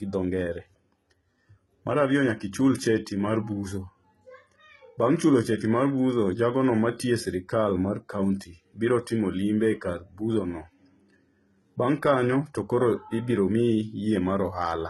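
From start to finish the speech carries heavy HE-AAC compression damage. Nothing sounds above 11.8 kHz. The treble that remains is not the original. It is copied up from the lower bands and shaped by a coarse envelope. So harmonics above the crossover fail to line up with those below. S sounds come out gritty and lispy, with a metallic edge. The damage is heavy enough that it likely comes from a bitrate around 16 kbps.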